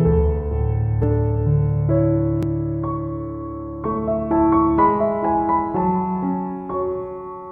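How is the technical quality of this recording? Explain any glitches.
Two brief glitches stand out, at 1.03 s and 2.43 s. Each is a jump where the sound skips ahead, losing about 10 ms and then about 20 ms. The likely cause is a dropped buffer (overrun): samples were overwritten before being read, so the surrounding audio is spliced directly together.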